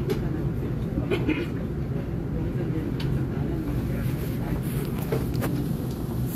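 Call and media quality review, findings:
No audible defects found in the audio; nothing to trace to any component, no action required.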